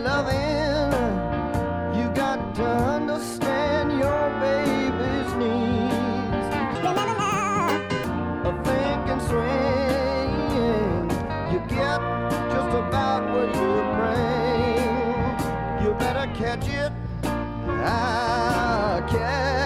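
From 6.75 to 8.04 s, a section at the wrong speed: that stretch was likely played back against the wrong clock, running at 1.72 times its proper rate. The sound there turns hurried and jumps roughly ten semitones higher, then snaps back.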